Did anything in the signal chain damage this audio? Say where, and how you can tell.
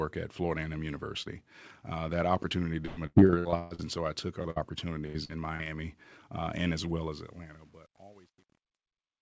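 Yes. On the network side, repeated packet loss (robotic sound) runs from 2.86 to 3.81 s and from 5.06 to 5.68 s. Concealment patches roughly half, then a third, of each span, making it choppy and robotic.

A short concealed packet loss at 4.43 to 4.46 s drops about 20 ms. The decoder extends the preceding sound across the hole, leaving a brief smear or wobble.

A burst of packet loss follows at 4.50 to 4.58 s, about 60 ms missing. The last sound is held and faded, then audio resumes with that stretch gone.

Truncation distortion on a fade starts at 6.98 s. A gain stage without dither, which fits roughly 9-bit resolution, turns the fade's tail gritty from 7.21 s.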